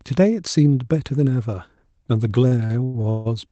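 From 2.47 to 3.27 s the speech suffers repeated stalls (stutter): five late-packet gaps, longest 154 ms, are filled by stretched sound, so it drags rather than losing syllables.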